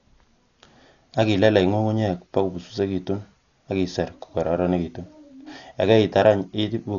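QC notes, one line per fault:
Throughout: Dolby Digital compression, likely, with heavy damage. The speech sounds dull, with nothing above 6.9 kHz and a rough, fluttering noise around voiced tones, which fits roughly 48 kbps. Starved frequency lines get dither noise instead of detail. A spectrogram shows a hard ceiling and speckled, smeared harmonics.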